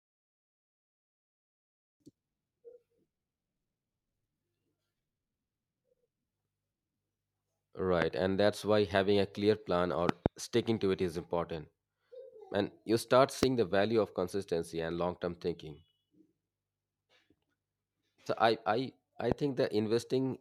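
Loud pops hit at 8.02–8.04 s before "and that's why having", a double at 10.09–10.28 s, 13.43–13.45 s after "you start", and 19.32–19.34 s after "I I", each roughly 20 dB over the speech, likely voltage spikes from a plug or switch.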